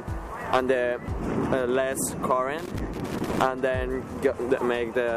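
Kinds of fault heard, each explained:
Loose connector crackle: a worn or dirty contact keeps making and breaking, chopping the signal into an irregular burst of scratchy crackle from 2.59 to 3.42 s.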